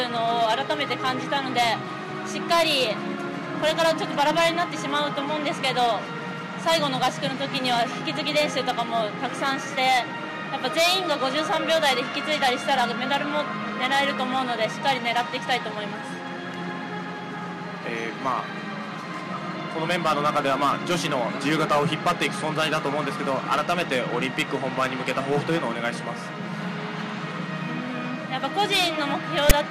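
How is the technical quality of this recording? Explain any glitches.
The recording has one glitch, right at the end. At 29.50 s there is a very short burst of harsh static, lasting only about 14 milliseconds. It is a case of file tags played as audio. A block of text metadata was read by the player as if it were sample data. Text bytes make a rasp rather than true noise. The burst is loud and leans to one side. It starts and stops with hard edges.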